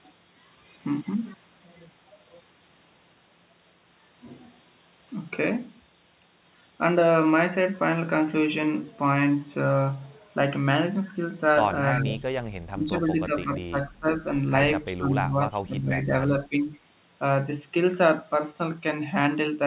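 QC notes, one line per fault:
11.93–12.3 s, 14.85–15.29 s and 15.48–15.61 s, echo leak: a faint copy of the speech trails 328 ms behind, about 20 to 25 dB down, likely from loudspeaker pickup the echo canceller didn't remove.
11.94–12.21 s, 12.71–12.95 s, 13.12–14.08 s, 14.95–16.33 s and 16.49–16.68 s, speech suppressed in double talk: the talker dips by roughly 10 to 20 dB in pieces, likely because the echo canceller turned both sides down while they overlapped.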